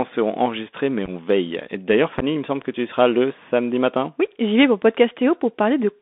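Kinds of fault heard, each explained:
Bluetooth CVSD headset codec: The speech runs through the narrowband headset codec for the whole clip. It codes each sample as a single up-or-down step whose size adapts, and the sound fits a 64 kbps link. The band sits between roughly 250 Hz and 3.6 kHz, so the top end is gone. The damage is plainly audible. Sibilants turn scratchy, loud bright moments distort where the step cannot keep up, and a grainy hiss sits under the voice.
Unconcealed Bluetooth headset packet loss: Short voice packets between headset and phone went missing, and nothing patched the gaps. The first loss falls at 1.06 to 1.09 s. About 15 ms of audio drops out in a few tiny pieces, and no gap is longer than 3.8 ms. The second falls at 2.19 to 2.24 s. There about 22.5 ms is lost, including one 11.2 ms hole. Both leave short holes with abrupt edges.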